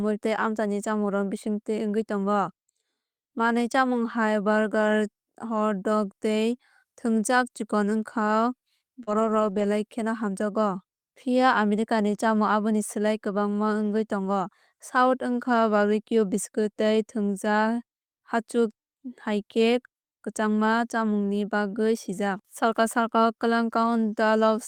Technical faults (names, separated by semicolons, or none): short concealed packet loss; lost packet rebuilt from error correction